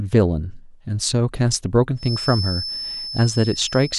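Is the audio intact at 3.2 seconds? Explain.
No. A feedback whistle runs from 1.94 s to the end: a 5.3 kHz tone around 10 dB below the speech, likely from a loudspeaker-to-microphone loop held just short of runaway.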